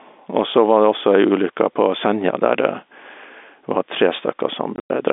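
All the way through there's gain pumping. The level swings by about 5 dB, pulling loud and soft parts closer together so the sound is squashed, likely from an over-driven limiter clamping down. Then from 4.76 to 4.9 s, packet loss filled with silence chops about 120 ms out across 160 ms, with hard-edged holes up to 100 ms, which fits 20 ms packets, on top of the narrow telephone band.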